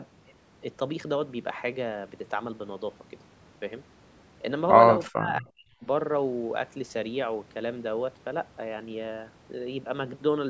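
From 5.09 to 5.85 s, an echo canceller, likely misreading double talk as echo, cuts speech by about 40 dB: speech suppressed in double talk.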